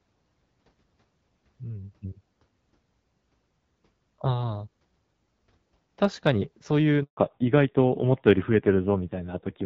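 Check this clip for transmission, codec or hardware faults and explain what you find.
Two faults stand out, both near the end of this speech clip.

From 7.03 to 7.17 s there is a handover gap: while the call switched networks, no speech frames arrived for 140 ms. The sound fades within a few tens of milliseconds, then drops to silence. On the waveform this is a flat strip; on the spectrogram, a clean vertical blank.

From 7.17 s to the end comes a fallback to narrowband. The call dropped from HD Voice to a narrowband codec, and the audio turns duller and rasper, which fits a low rate around 5.9 kbit/s. The spectrogram shows a hard ceiling at 4 kHz, with everything above it empty. Before the switch, energy reaches up to about 7 kHz, as expected from the wideband codec with only light coding damage.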